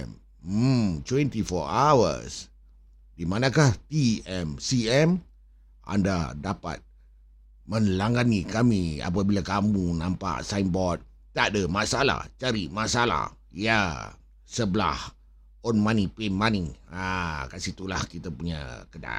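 A ground loop or nearby transformer couples the 50 Hz power line into the signal, so mains hum sits under the speech throughout, roughly 30 dB down.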